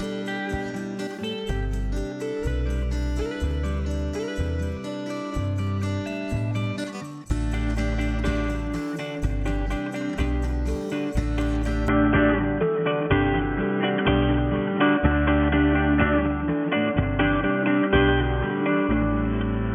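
Input switched to a poorer device, likely, at 11.88 s: the sound abruptly turns boxy, cutting off above 3.4 kHz, shifting about 5 dB and gaining faint new noise.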